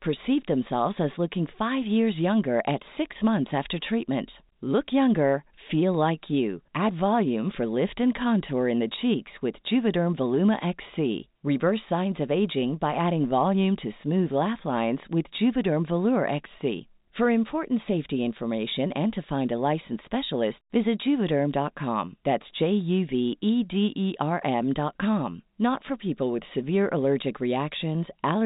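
No technical faults are audible.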